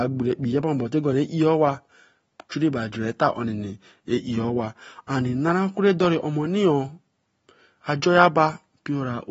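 Throughout the recording, the speech shows signs of being squeezed through a low-bitrate codec, likely AAC compression. The encoder discards everything above 7.6 kHz and quantises the remaining spectrum coarsely, and the amount of damage fits a bitrate of roughly 24 kbps. The speech sounds dull and muffled, with no air at the top, and sibilants and held vowels take on a smeared, warbling, fizzy texture that stays plainly audible from start to finish.

At 2.49 s there is pre-echo. A sharp attack lands late in one transform block, and the codec spreads the quantisation noise meant for that loud onset across the whole block, including the quiet stretch just before it. The result is a brief hiss of about 15 ms that arrives ahead of the attack, so the onset seems to start early and loses its crispness, sounding softened and blurred.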